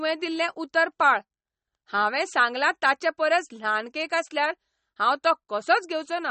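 Throughout, the speech is dull above about 8.3 kHz and sounds watery. Likely MP3 compression at a low bitrate, around 32 kbps, starving the treble.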